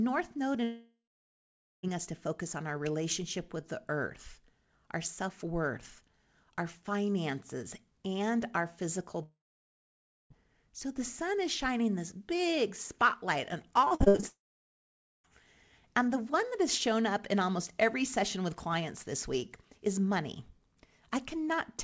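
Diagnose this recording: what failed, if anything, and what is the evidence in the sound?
The network stage is the most likely cause of three long outages, where the receiver got no packets at all: 0.64–1.85 s (ending just before "us to focus on"), 9.23–10.35 s (right after "finances and our physical") and 14.28–15.30 s. This is a long network dropout. Each time, the concealment stretches the last sound into a brief fading buzz, then leaves roughly 0.8–0.9 s of near silence. The audio resumes later with that stretch gone.

Just before the third outage, from 13.85 to 14.24 s right after "this big spotlight on", the network path dropped or delayed packets eight times in quick succession. This is repeated packet loss. Each hole, the longest 61 ms, is patched by extending the previous sound. Over half of that span is synthetic fill, so the audio turns choppy. The call codec path carries nothing above 8 kHz, which fits G.722.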